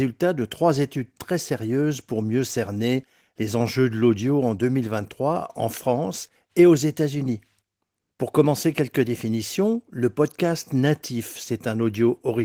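It is a speech recording, and nothing in it is technically wrong, with the Opus voice compression working as intended.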